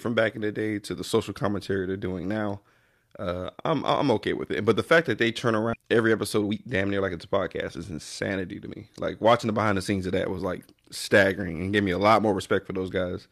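At 5.73 s, just after "fact that they turn", roughly a second of speech was dropped in a skip ahead, so playback jumps straight to later audio with no gap or fill, and the two sides butt together abruptly.

Next, the jitter buffer was holding more speech than its target, so the receiver trimmed short pitch-period pieces repeatedly. From 5.83 to 7.34 s this jitter buffer speed-up runs the speech at 119% with unchanged pitch, removing about 0.3 s and sounding noticeably hurried. From 7.78 to 9.01 s, ending just before "watching the behind the", a milder 107% pass removes about 0.1 s more.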